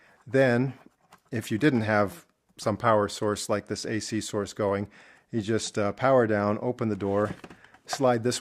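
Nothing in this audio stands out as a technical problem; it just sounds the way it should all the way through.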